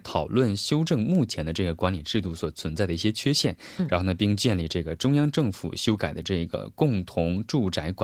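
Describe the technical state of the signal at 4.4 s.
At 4.4 s the speech is intact, with no fault at that moment.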